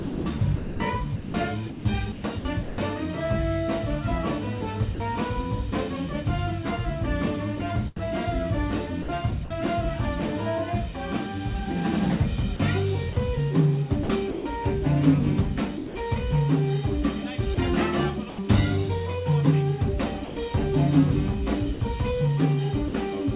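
From 0.00 to 2.78 s the sender's voice detector likely toggled transmission on and off several times, so about 1.19 s of real signal was swapped for comfort noise. This is sound chopped by the voice detector. Soft portions and edges of the sound vanish.

At 4.94 to 5.00 s the detector likely judged quiet material to be background and stopped sending, so 60 ms of sound was dropped by the voice detector. The audio briefly gives way to steady comfort noise before resuming.

Between 7.96 and 9.50 s the same chopping returns, with about 150 ms replaced. From 12.56 to 14.45 s about 270 ms is swapped out, and the result is audibly choppy.

At 15.77 to 15.95 s there is another dropout, with 180 ms lost to comfort noise. Chopping follows from 17.54 to 18.38 s, with 120 ms replaced.

From 20.24 to 20.36 s a third drop removes 120 ms. A last chopped stretch runs from 21.74 to 22.94 s, again with 120 ms filled in.

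Throughout the clip, the call path itself shows nothing above 4 kHz, which fits a G.711 A-law telephone codec.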